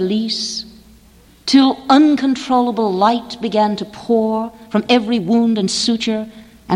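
From 4.34 s to the end, a time-stretched section runs about 1.35 times faster at unchanged pitch, likely from software squeezing it by dropping short pieces. It sounds rushed, with compressed events and small seams in the waveform.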